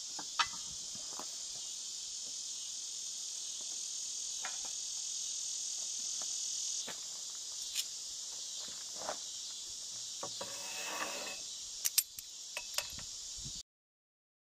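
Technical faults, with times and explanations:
13.61 s, cut-off end: the sound stops dead mid-event and drops straight to digital silence for the last 0.8 s or so, with no natural decay at all. The final buffers never got written out, so playback simply has nothing left to play.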